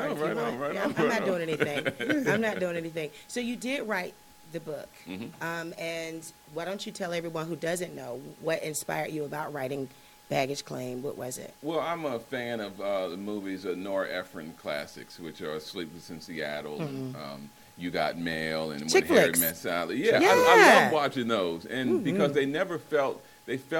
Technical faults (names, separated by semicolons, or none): none